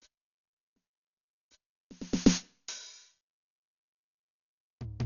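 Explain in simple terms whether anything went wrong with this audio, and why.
Yes, from start to finish the music sounds dull and muffled, with nothing above about 6.9 kHz and a rough, fluttering noise around tones. This is likely heavy Dolby Digital compression: squeezed too hard, the codec discards treble and replaces missing detail with noise.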